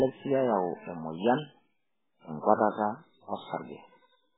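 Speech, and the whole thing has heavy MP3 compression damage: nothing above 3.8 kHz, watery, swirly smearing throughout, likely from a starved encoder around 8 kbps.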